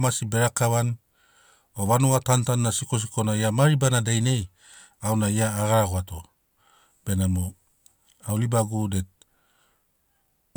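No technical faults can be heard anywhere in this speech recording.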